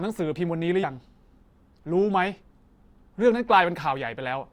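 At 0.83 to 0.85 s the speech jumps forward as compressed frames are skipped: a couple of frames never reach the output, so roughly 50 ms of audio vanishes. Unlike a dropout there is no silent gap.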